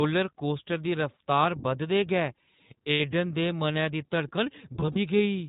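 Throughout, the speech carries the sound of the iLBC codec. The band stops at 4 kHz, so sibilants and breath lose their top end. Each short frame's excitation is coded on its own, which gives the voice a rough, synthetic grain that is plainly audible here. The character points to the 15.2 kbps mode with 20 ms frames. The coding damage sits on every syllable rather than coming and going.

From 2.92 to 3.02 s come lost iLBC frames: about 80 ms of audio goes missing, which fits four consecutive 20 ms frames. The decoder fills the hole by repeating the last pitch cycle blended with noise, so the gap sounds like a briefly held, slightly buzzy vowel. Since each frame decodes independently, the voice snaps back to normal as soon as real frames resume.

From 4.80 to 4.98 s a second stretch of lost iLBC frames occurs, again about 80 ms in total but spread across roughly 160 ms. The longest single run is around 40 ms. 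Here the concealment produces short, repeated patches of buzzy, breathy sustain interleaved with intact audio, so the effect is a stuttering roughness rather than one held sound.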